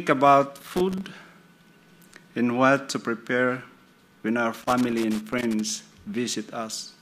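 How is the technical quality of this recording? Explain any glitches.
The recording has a loose connector crackle, heard twice: from 0.56 to 1.05 s and from 4.59 to 5.70 s. A worn or dirty contact keeps making and breaking as it shifts. This chops the signal into irregular bursts of scratchy crackle.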